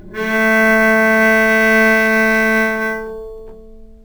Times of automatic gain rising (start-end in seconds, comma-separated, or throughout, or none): none